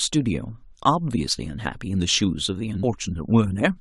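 At 2.82 s the speech has a brief blip from damaged data in the compressed stream. The decoder misreads corrupted frames and loses sync momentarily.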